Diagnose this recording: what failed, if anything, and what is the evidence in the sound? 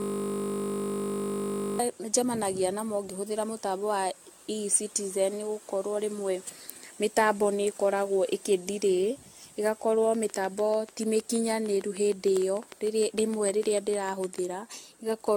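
Generation loss, throughout: the codec stage. The speech sounds swirly, smeared and hollow, with nothing above 17 kHz and blurred attacks. The damage is heavier than one AAC-LC pass at a rate near 96 kbit/s would leave. The likely cause is around ten decode-and-re-encode cycles, each re-quantising on a shifted frame grid so the losses compound.

System hang loop, 0.00 to 1.79 s, already running when the clip opens: the driver or buffer stage. A 20 ms slice of audio repeats exactly, producing a steady 50 Hz buzz. The host stalled while the hardware kept replaying the same ring-buffer segment.

Train of clicks, 10.15 to 14.39 s: analogue wiring or interface. About 30 similar clicks arrive at a regular 6.6 per second, peaking about 10 dB above the speech and ticking through pauses as well. This points to periodic interference from nearby equipment or a struggling interface injecting pulses.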